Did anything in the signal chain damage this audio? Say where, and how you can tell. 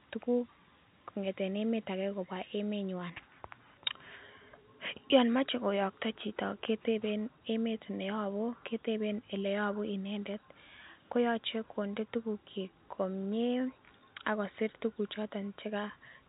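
No: nothing in the chain damaged this speech; it is ordinary G.711 telephone coding, whose band stops at about 3.9 kHz and whose faint, level-tracking quantisation hiss is part of that format.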